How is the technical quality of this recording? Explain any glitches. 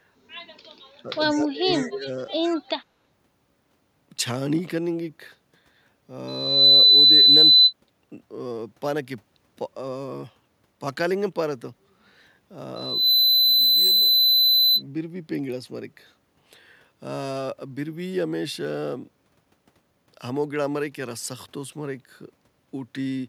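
The recording has clear technical problems: brief suppression of the talker near the start, two faint echo returns, and two loud feedback squeals later on.

Speech suppressed in double talk, 1.03 to 1.10 s and 1.31 to 2.27 s. The echo canceller was likely unable to tell the near talker from the loudspeaker echo while both sides were active, so it turned everything down. The first dip is short and shallow, about 10 dB over roughly 70 ms. The second lasts about a second and drops as far as about 25 dB, so the speech fades.

Echo leak, 1.78 to 1.82 s and 2.43 to 2.57 s. On a loudspeaker end, the canceller likely failed to remove everything its microphone picked up, and the residue was sent back. The result is a faint copy of the speech trailing it by 98 ms, about 25 dB and then about 20 dB below the main level. It comes as short scraps rather than a sustained echo.

Loudspeaker feedback squeal, 6.28 to 7.73 s and 12.76 to 14.83 s. 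A microphone picked up the loudspeaker it feeds, and at 4 kHz the loop gain went above one, so that tone fed on itself. Each time, a piercing 4 kHz whistle swells up in under half a second and sits over the speech. It reaches about 15 dB above the signal the first time and about 10 dB the second.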